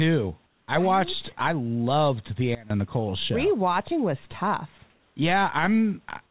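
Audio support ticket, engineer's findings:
Comfort noise in place of the background, 0.46–0.68 s (before "I watched I loved") and 4.9–5.16 s (after "was tough"): room background swapped for steady, featureless hiss, about 2–3 dB quieter. Spectrogram: smooth uniform band below the 4 kHz ceiling, texture gone. Likely DTX with receiver-generated noise.

Sudden gain jump, 2.55–2.70 s, after "watched I loved the": sound and background drop together by about 20 dB, then snap back. Waveform: rectangular notch in the envelope, vertical edges, no ramp. Likely unramped digital gain change applied mid-stream.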